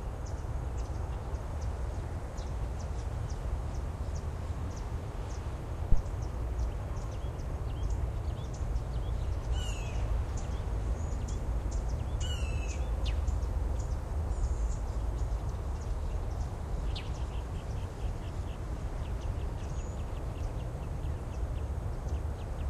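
A deep thump at 5.92 to 6.01 s peaks at about -11 dBFS and dies away within 20 ms: a phantom power thump from supply switching on a live input.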